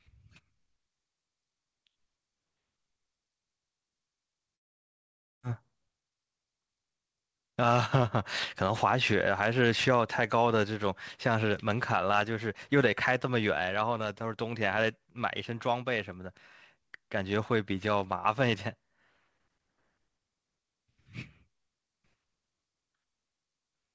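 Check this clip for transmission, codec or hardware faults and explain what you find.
Two transmission faults are audible in this speech. The audio ends at 8 kHz, which fits a G.722 call codec.

Long network dropout, 4.56 to 5.45 s. Packets likely stopped arriving. A fading buzz fills in, then silence, and about 0.6 s of speech is lost.

Jitter buffer speed-up, 5.53 to 7.52 s. The receiver trims pitch-period pieces to shed a backlog of roughly 0.3 s. Speech runs 12% fast at unchanged pitch and sounds hurried.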